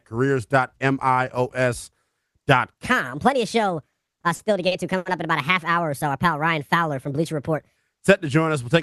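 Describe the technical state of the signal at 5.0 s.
At 5.0 s the audio sits inside a section at the wrong speed, running from 2.84 s to 7.76 s. It plays 1.4 times faster than it was recorded, so the speech is hurried and raised by roughly five semitones, with pitch and tempo shifting together. This most likely comes from an editor or player fitting the audio to the wrong clock, which speeds up the playback rate for that stretch.

The moment also falls within repeated stalls (stutter), spanning 3.91 s to 5.07 s. Packets arrived late or too slowly, so the jitter buffer ran dry six times. Each time, the receiver stretched the last sound until fresh audio came in. That concealment adds up to 220 ms, about a fifth of the span, and the longest single hold is 80 ms. Nothing is actually lost, but the sped-up speech drags and hiccups in short repeated catches.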